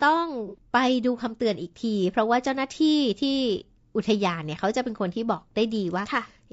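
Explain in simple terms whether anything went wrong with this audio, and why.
AAC frame loss with concealment, from about 0.47 to 0.58 s: a brief smeared, noisy patch where pieces of the audio stream went missing, which fits a couple of lost frames. The decoder filled the gap by reusing and scrambling the last good sound.

Low-delay AAC compression, throughout the whole speech clip: the voice sounds plainly rough and grainy, with a hiss between the tones and a thin top end. The likely cause is this video-call codec, which works in very short slices and runs short of detail.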